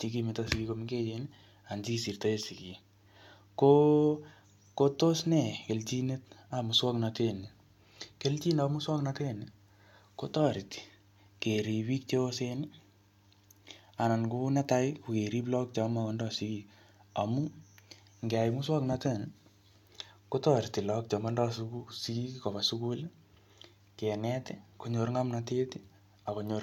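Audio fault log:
No faults are heard in this speech recording. Nothing in it calls for an entry in this log.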